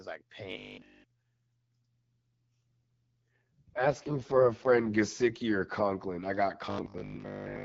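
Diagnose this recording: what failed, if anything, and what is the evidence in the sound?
At the driver or buffer stage, a rigid 50 Hz metallic buzz covers all of 0.52 to 1.04 s and most of 6.66 s to the end. This is robotic sound from repeated short buffers, likely from starved buffers looping roughly 20 ms segments. On a spectrogram it appears as a comb of harmonics at 50 Hz spacing; on the waveform, as identical 20 ms blocks.

From 3.34 to 4.90 s the sound turns rougher and more synthetic. This is an AMR rate drop at the network stage: the link forced the AMR-WB codec down from its normal 12.65 kbit/s to 6.6 kbit/s. On a spectrogram the bandwidth is unchanged with no gap, but the harmonics look smeared and noisier until the rate recovers.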